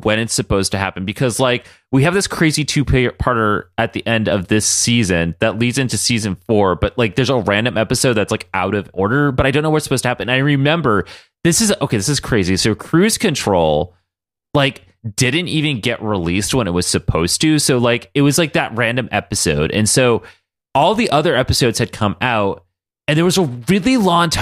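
No faults are audible anywhere in the recording.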